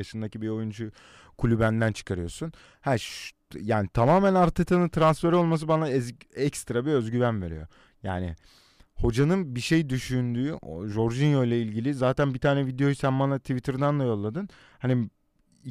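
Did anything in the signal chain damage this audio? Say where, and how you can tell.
No, nothing along the way from capture to playback has left a mark on this speech that I can hear, so there's nothing to pin on any stage of the chain.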